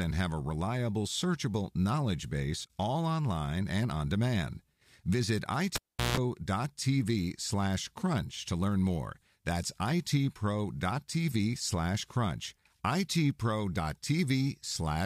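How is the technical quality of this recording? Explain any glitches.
The recording has one glitch, a cable pulled and plugged in, from 5.76 to 6.17 s. A live connection breaks with a pop and the speech drops to near silence for about 0.37 s. As the plug goes back in, only its tip touches first, picking up about 0.16 s of 60 Hz mains buzz before a second pop restores the signal.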